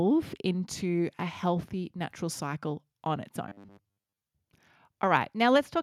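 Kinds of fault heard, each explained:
Robotic sound from repeated short buffers: new audio likely reached playback too seldom between 3.48 and 4.21 s, so the software kept replaying its most recent short chunk while most of the real signal in that stretch was skipped. Each replay restarts at the same interval, imposing a steady 100 Hz buzz, which fits a chunk of about 10 ms. The voice turns into a rigid, metallic drone that only loosely tracks the speech.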